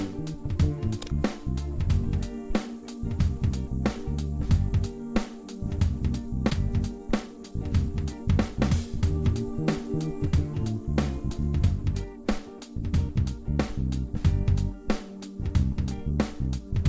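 The audio has passed through a call path, and nothing above 8 kHz survives, which fits a wideband codec such as G.722. At 6.50 s there is a skip ahead. Playback jumps forward with no gap. Roughly 0.7 s of sound is simply missing. The two sides are joined almost directly. This points to a jitter buffer that overflowed and dropped waiting audio. Just after, from 6.64 to 7.52 s, comes a jitter buffer speed-up. The sound runs about 8 percent fast at unchanged pitch, so it feels hurried. The receiver trimmed short pitch-period pieces, around 70 ms in total, to cut its excess delay.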